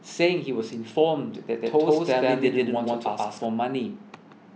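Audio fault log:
1.61–3.45 s, doubled audio track: the speech gains a second copy trailing about 150 ms behind, at roughly the same level as the original. The copy is full-band and dry, with no decay or room colour, so it reads as a clean repeat rather than an echo. It cuts in abruptly at 1.61 s and drops out just as sharply at 3.45 s. The likely cause is a slower second capture path or an edit holding two out-of-step copies.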